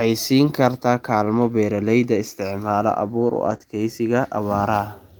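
Speech, and right after "beeralayda isticmaala abuur u" a cluster of packet-loss repairs occurs. From 3.49 to 3.55 s, and again from 3.62 to 3.64 s, there is a lost packet rebuilt from error correction. The decoder played the low-bitrate copy carried in the following packet, so the real sound continues without a gap but turns rough and noisy for about 40 ms and then 20 ms. Between them, from 3.57 to 3.62 s, is a short concealed packet loss. About 20 ms never arrived, and the decoder filled it by extending the preceding sound. Unlike the coarse-but-genuine rebuilt frames, this fill is a brief smear or wobble with no new content in it.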